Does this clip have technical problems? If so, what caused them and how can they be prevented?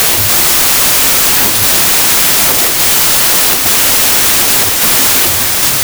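Yes. Wrong sample width throughout: packed 24-bit data read as 32-bit samples plays about 1.33 times fast and high-pitched under loud noise, with broadband spectrogram hash. Prevent it by reading the sample format from the file header, not assuming it.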